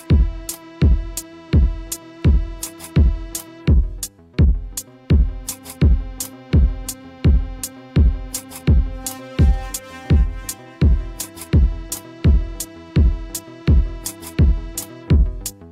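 Nothing stood out as a technical problem on listening.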